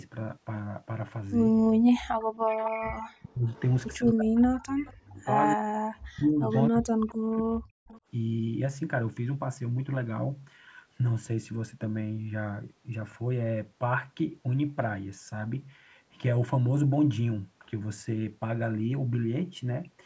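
From 1.88 to 3.55 s the echo canceller likely could not tell the near talker apart from loudspeaker echo while both sides spoke, so it clamped down on everything. This is speech suppressed in double talk: the voice dips by as much as about 40 dB, thins out and breaks into pieces for around one and a half seconds in total. The same thing returns from 3.97 to 7.86 s, this time costing roughly three seconds of speech.

Meanwhile echo leak appears, most likely because the loudspeaker side's canceller let part of its loudspeaker pickup slip back into the call. A copy of the voice trails 264 ms behind at 2.61, 3.56, 4.58, 5.47, 6.50 and 7.88 s. Each scrap lasts between about a tenth and half a second. The first is strongest at about 15 dB below the speech, and the others fall between about 20 and 30 dB down, faint.

All of this sits within the call's band-limited sound, which carries nothing above 8 kHz.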